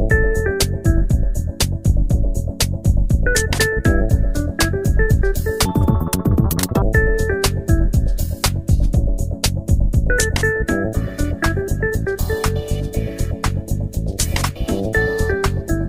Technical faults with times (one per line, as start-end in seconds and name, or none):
5.66-6.82 audio read two samples at a time (double speed)